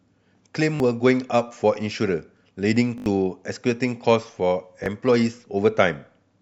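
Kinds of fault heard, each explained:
Repeated buffer: The playback device ran short of new audio and replayed its last block instead. Each repeat lasts about 20 ms, which fits a 20 ms buffer. At 0.76 to 0.80 s the block plays twice more. At 2.98 to 3.06 s it plays four more times, the longest burst. At 4.84 to 4.86 s it plays once more. Each join is hard, and some speech is skipped.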